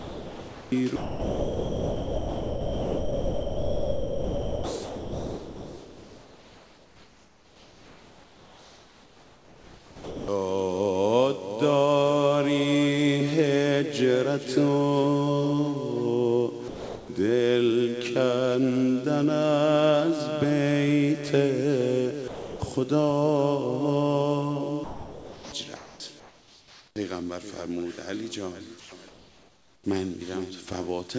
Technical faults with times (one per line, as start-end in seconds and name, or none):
0.00-10.28 sound chopped by the voice detector
16.68-17.08 sound dropped by the voice detector
22.28-22.60 sound dropped by the voice detector
24.84-25.52 sound dropped by the voice detector
24.84-26.96 comfort noise in place of the background
28.80-29.84 comfort noise in place of the background